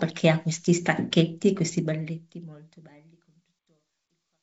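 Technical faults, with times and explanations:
No technical faults are audible in the speech; the signal holds steady, with the level easing away gently over roughly the last two seconds.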